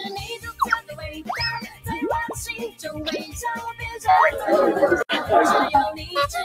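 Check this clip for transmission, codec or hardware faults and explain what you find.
There are three problems: a speech-tuned noise suppressor running on material it wasn't built for, several spots where it bites hard, and a brief connector dropout.

Noise suppressor applied to music or sounds, throughout: it mistakes steady tones and tails for noise, so the level keeps swinging by roughly 10 dB and the sound pumps.

Sound cut by the noise suppressor at 0.33–0.62 s, 0.80–1.32 s, 1.63–1.86 s and 2.69–2.84 s: held parts sink by about 12, 15, 12 and 14 dB, and decays get chopped short.

Intermittent contact at 5.00–5.12 s: a loose cable or plug opens for about 68 ms, so the sound drops out with crackle at both edges and faint hiss underneath.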